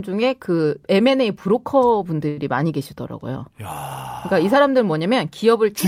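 At 2.28 to 2.38 s, a short stall from a late packet holds the speech for about 90 ms with a slight buzz or dip, then resumes where it left off, with nothing lost.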